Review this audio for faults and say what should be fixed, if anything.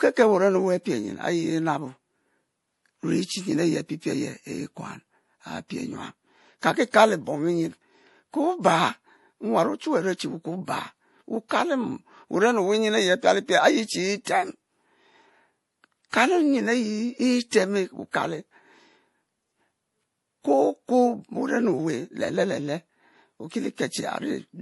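The speech sounds dull throughout, with nothing above about 11.5 kHz and the artefacts of heavy MP3 coding. This is likely low-bitrate audio saved at a high bitrate: the band limit and artefacts fit an earlier MP3 pass at around 48 kbit/s, later re-encoded at something like 256 kbit/s. The larger second file keeps every loss from the first and cannot bring the missing top end back. To prevent it, re-encode only from the original lossless source, never from a low-bitrate copy.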